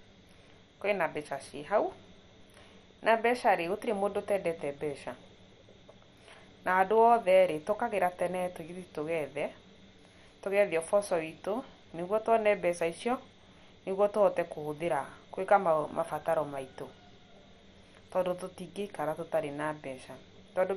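From start to finish the speech carries heavy damage of the kind MP2 compression leaves, likely from a low-rate encode, one that fits something near 56 kbps. Nothing remains above 13.2 kHz, and upper sub-bands drop in and out as the encoder runs short of bits, while the surviving bands are coarsely quantised. The result is dull and gurgling, with a granular grit, unlike a plain low-pass filter's clean dullness or the watery swirl of MP3.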